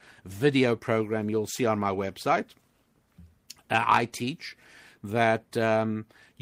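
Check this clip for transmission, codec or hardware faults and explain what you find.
No transmission, codec or hardware faults are audible here.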